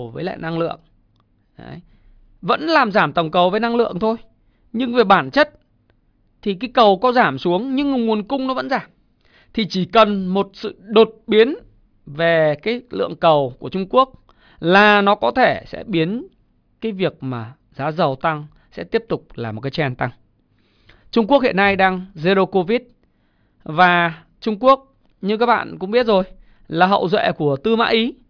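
A short recording of speech, and nothing in it sounds technically wrong.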